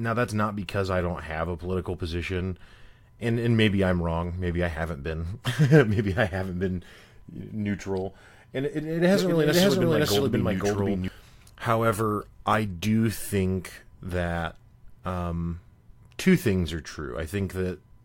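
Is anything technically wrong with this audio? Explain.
Yes, there's a doubled audio track from 9.14 to 11.08 s. The speech is joined by a full-band copy of itself about half a second behind and roughly as loud, so everything echoes cleanly with no decay or room colour. It cuts in and out abruptly, likely from a second, slower capture path or an edit that left two copies out of step.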